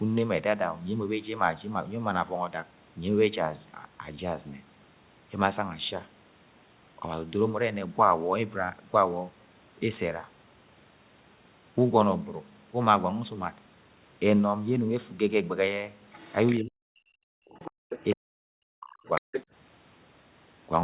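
In this speech recording, heard through a narrowband call path whose content stops at about 4 kHz, as fits G.711 mu-law at 64 kbps, a second voice surfaces in the last few seconds: at 16.12 to 16.58 s and 17.51 to 17.71 s it sits roughly 15 dB under the talker, then louder at 17.89 to 18.16 s (about 10 dB down) and 19.15 to 19.44 s (only about 5 dB down). This is the other side's voice leaking through, likely loudspeaker playback reaching the microphone that the echo canceller failed to fully subtract. Around these scraps, the main talker's own voice sinks sharply from 16.6 to 17.47 s and again from 18.14 to 19.28 s, falling by around 40 dB in places and losing about a second of speech each time. That is speech suppressed in double talk, likely the canceller turning everything down because it could not tell the near talker from the echo while both were active. Between those stretches, at 17.75 to 17.86 s, the room's background sound briefly vanishes, dropping about 40 dB for roughly a tenth of a second before returning. 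That is background gated by the echo canceller, which clamped the microphone hard while the loudspeaker was playing and then released it.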